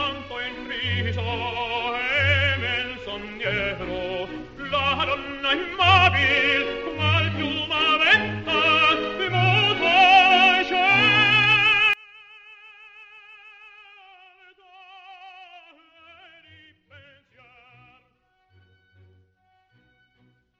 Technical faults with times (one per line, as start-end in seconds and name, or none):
11.93-20.60 one channel inverted